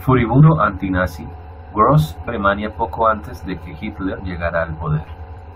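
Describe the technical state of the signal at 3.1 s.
At 3.1 s the speech signal is intact, with no audible fault at that moment.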